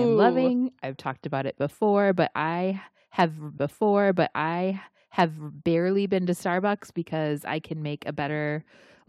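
A speech recording with a stream segment repeated: from 3.57 s to 5.56 s, about 2.0 s of programme plays a second time, with a blip at the jump back, just before "barely been to". The player fetched or queued that segment twice.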